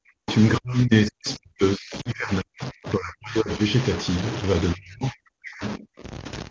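Speech over a call carries grainy distortion throughout that follows the voice and sputters on quiet passages. This is likely low bit depth without dither: roughly 5 bits, truncated, with error about 15 dB below the signal, unlike steady background hiss. From 0 to 0.28 s, 0.58 to 3.59 s and 4.74 to 6.04 s the talker ducks by up to about 40 dB, which points to speech suppressed in double talk. Between 0.29 and 0.35 s a different voice surfaces about 20 dB below the talker, likely the other side's voice leaking through. At 2.01 to 2.11 s the sound drops to near silence and comes back rough. These are lost AMR speech frames, about 40 ms, which fits two 20 ms frames, and the held pitch separates this from the suppression dips.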